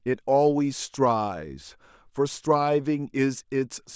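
No technical faults can be heard anywhere in this recording.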